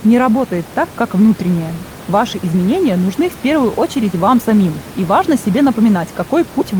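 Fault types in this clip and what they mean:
No faults are present in this speech clip. The room's background noise sits about 16 dB below the speech and belongs to the recording itself.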